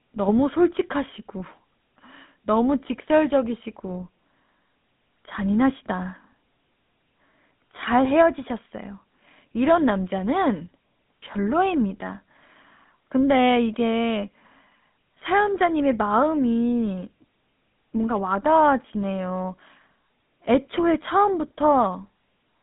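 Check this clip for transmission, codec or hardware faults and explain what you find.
One fault runs throughout: GSM full-rate codec coding. The speech was rebuilt from a vocal-tract model driven by regular pulses, which fits 13 kbps, on a 150 Hz to 3.7 kHz line, leaving plainly audible buzzy, gravelly roughness.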